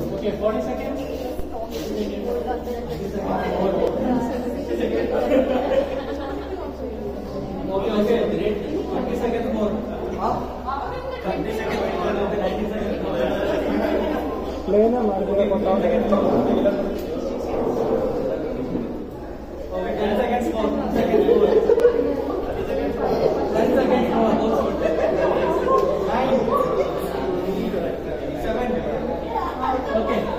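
At 3.87, 9.85, 21.80 and 27.77 s the sound jumps forward, each time losing a few tens of milliseconds that are spliced shut with no silence between. The spacing of about 6 s points to audio missing between chunks, likely from a recorder writing fixed 6-second blocks and dropping a sliver at each handover. On a waveform each skip shows as an abrupt seam where the envelope steps. On a spectrogram it appears as a sharp vertical discontinuity.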